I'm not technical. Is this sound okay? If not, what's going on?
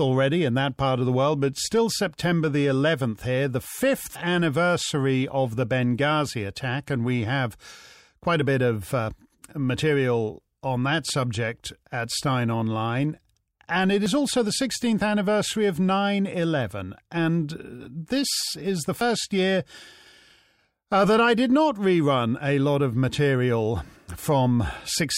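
No. There are four brief skips, at 4.16, 9.11, 14.06 and 19.01 seconds, each dropping roughly a twentieth of a second, with the sound on either side joined directly together. The even spacing of about 5 seconds points to audio missing between chunks: the recording was likely made in 5-second pieces, and a small slice was lost each time one piece ended and the next began.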